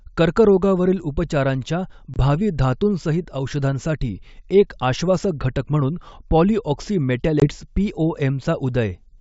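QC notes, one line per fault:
2.14–2.16 s, packet loss on an ADPCM call: a hard-edged gap of about 20 ms, a single packet's worth, between "कर्करोगावरील उपचारांच्या" and "भावी धातुंसहितऔषधांसाठी एक आश्वासक". The receiver filled the gap with silence, and the decoder's adaptive predictor and step size then no longer matched the sender's. Speech resumes slightly distorted before resynchronising.
7.40–7.48 s, packet loss on an ADPCM call: the same mechanism, again about 20 ms lost. The same abrupt hole is followed by a short disturbance while the state settles. The wideband band-split coding sounds clean, consistent with full-rate 64 kbit/s G.722.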